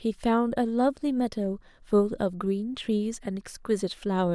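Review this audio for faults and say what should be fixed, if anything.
Nothing here needs fixing, since no faults turn up anywhere in this speech clip.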